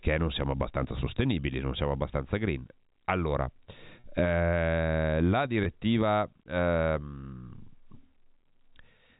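Packet loss with pitch repetition occurs at 4.00 to 4.04 s, just before "eh la", and at 5.64 to 5.66 s, just after "eh la". About 40 ms and 20 ms are lost, which fits two packets and then one. The receiver repeats the last pitch period, so each gap sounds briefly held and buzzy.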